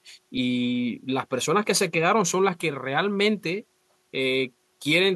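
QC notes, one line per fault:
No faults were heard in the speech. Nothing here needs a time, a range or a flag.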